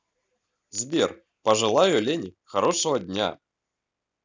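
A steady buzz at about 33.2 Hz runs under the speech from start to finish, with the timbre unchanged. This is a block size mismatch (padded): each block arrives short and is zero-filled, so a brief gap recurs every block and the speech plays at 0.996 times normal speed.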